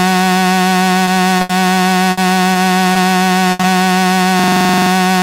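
A steady USB whine runs under the whole clip. It sits at a fixed pitch of 1 kHz with harmonics and is strongest around 5 kHz, about 25 dB below the audio. It comes from the bus's 1 ms frame activity leaking into the power or ground of the audio path. Because its pitch never drifts and it follows the 1 kHz grid, it is unlike mains hum or an acoustic tone in the room.

The short concealed packet loss events fall at 1.05, 1.37, 2.53, 2.93 and 3.61 s. Each is a 20 ms hole that the receiver filled by extending the preceding sound and then blending back into real audio. The result is a brief smear or wobble, and a short transient can disappear. These differ from the bursts because they are too short to fade, so the patch stays at full level and passes quickly.

The bursts of packet loss come at 1.41 to 1.51 s (80 ms, immediately after the 1.37 s dropout), 2.11 to 2.19 s (60 ms) and 3.51 to 3.61 s (80 ms, running straight into the 3.61 s dropout). 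Here a longer stretch was lost. The concealment holds the last sound and fades it, giving a decaying buzz or hiss. The audio then resumes further along with that portion missing. That fade and gap are what set these apart from the 20 ms dropouts.

From 4.40 to 4.91 s a system hang loop repeats one 42.67 ms fragment exactly 12 times, which fits a 2048-sample buffer. The rigid 23.4 Hz repetition gives a machine-gun stutter. Unlike packet-loss concealment, nothing fades or blends. The identical slice keeps recurring, and when it releases, the audio picks up with essentially nothing skipped.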